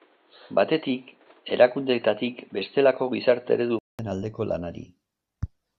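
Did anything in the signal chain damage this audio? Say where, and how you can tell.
Yes. Until 3.99 s the sound stops at 4.3 kHz and carries its own faint background noise. After a 200 ms gap it turns fuller and shifts in level by about 5 dB. That points to a likely input switched to a poorer device at the driver stage, not codec band-limiting, which wouldn't change the noise floor.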